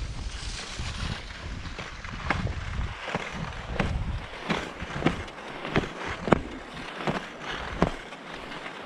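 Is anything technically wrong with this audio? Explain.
Yes. At 1.19 s there is damaged data in the compressed stream. Corrupted bytes at that point make the decoder misread the affected frame, lose sync and hunt for the next valid frame header. The result is a brief chirp or blip in the audio.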